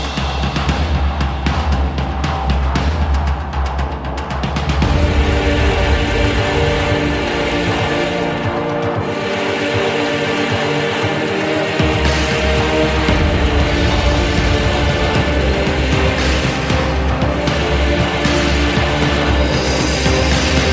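No technical faults can be heard anywhere in the clip. It comes through a working call path, and the absence of any content above 8 kHz points to a wideband call codec such as G.722.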